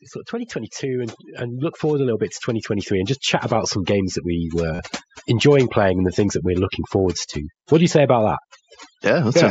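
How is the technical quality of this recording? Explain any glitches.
The recording has three faults: over-aggressive noise reduction throughout, a gradual gain rise in the first half, and one brief packet dropout. It passes through the wideband Bluetooth headset codec, mSBC, which carries the speech up to about 8 kHz with only light grain on louder sounds.

Overdone noise removal runs through the whole clip. The noise reduction stage is set too strong, so it pulls individual frequency bands far down or shuts them off whenever they sit close to its estimate of the noise. Quieter parts of the speech fall below that line and get removed with the noise. The background therefore does not settle into a smooth floor. It breaks up into twinkling, warbling specks that come and go behind the speech.

Automatic gain rising runs from 0.3 to 4.95 s, ending just before "enjoying playing and the". The automatic gain control judged the input too quiet and raised its gain step by step, by about 12 dB over more than four seconds. 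Because the control acts on the whole signal, speech and background swell together. The result is a slow climb in overall loudness rather than a jump.

Concealed Bluetooth headset packet loss falls at 4.75 to 4.79 s, also just before "enjoying playing and the". Audio packets between headset and phone were lost, a gap of 37.5 ms that fits a short run of consecutive lost frames. The receiver filled the gap by repeating the best-matching stretch of the most recent audio. That gives a short buzzy, tone-like hold at full level, with a small warble where real audio resumes.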